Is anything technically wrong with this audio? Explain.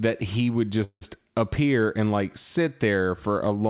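Yes, there's a call audio freeze from 0.84 to 1.03 s, between "he would" and "appear and like sit". Packets were likely held up, so the receiver stretched the last sound into a fading buzz or hiss, went silent for about 70 ms, then resumed late, nothing lost. The narrowband call path, nothing above 4 kHz, is audible throughout.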